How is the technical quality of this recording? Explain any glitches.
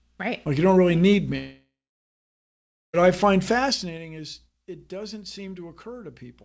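The recording has one clear glitch, a long network dropout in the middle of the speech, heard through a wideband call codec whose band stops at 8 kHz.

From 1.38 s to 2.95 s the speech breaks off. The last sound is stretched into a fading buzzy hiss, and then about 1.2 s of near-silence follows before the speech resumes with roughly 1.56 s of it gone. The likely cause is a stall in the network stream. The receiver had no packets to play, so it synthesized filler from the final sound until that ran out.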